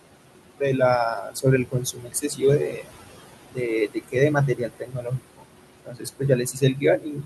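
A speech clip with two faults from a noise suppressor. Noise suppressor artifacts run throughout. The suppressor pulls down the bands it judges to be steady noise by about 21 dB, frame by frame. The room noise, sitting about 11 dB below the speech, drops away in the gaps and comes back under the talking. The second fault is speech cut by the noise suppressor. The suppressor mistakes parts of the speech for noise and turns them down along with the background. This happens at 1.16 to 1.45 s, 1.65 to 2.43 s, 2.59 to 2.92 s, 3.55 to 3.7 s, 3.89 to 4.16 s, 4.34 to 5.46 s, and from 5.85 s to the end. The drops reach about 14 to 22 dB. Within most spans, only part of the speech is hit, from a tenth of a second up to well over half a second. Those stretches sound swallowed and faint.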